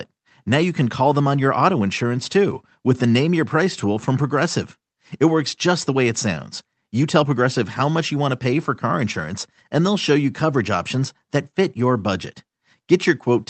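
No technical faults are audible anywhere in this clip.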